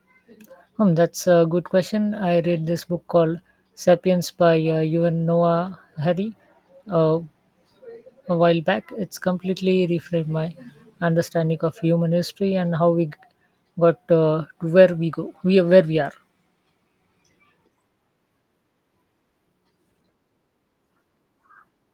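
No audible technical faults.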